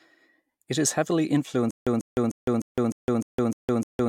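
At 1.71 s, right after "is heavily", the speech breaks into a stutter with silent gaps that lasts to the end of the clip. A fragment about 143 ms long plays, then about 161 ms of dead digital silence follows. The cycle repeats every 304 ms, eight times in all. The likely cause is a stalled player or stream replaying its last buffered piece at each retry. Everything that should have followed is lost.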